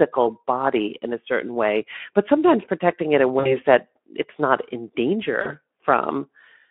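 At 3.39 s and again at 5.41 s, packets dropped out of the Speex stream and the decoder filled the gaps by extrapolation: VoIP packet loss concealed by the speech codec. Each gap, about 60 ms and then 40 ms, turns into a buzzy tone or coloured noise that fades, with weakened speech lingering until 3.56 s and 5.52 s.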